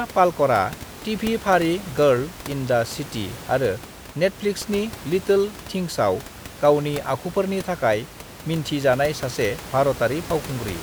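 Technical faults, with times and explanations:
No technical faults can be heard in the speech. Background noise from the room sits about 16 dB below the speech and belongs to the recording itself.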